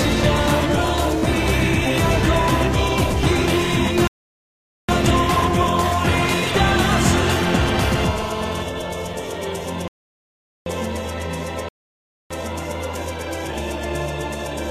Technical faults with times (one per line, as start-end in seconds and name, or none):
4.07-4.89 rebuffering stall
7.24-8.63 GSM phone buzz
9.88-10.66 rebuffering stall
11.69-12.31 rebuffering stall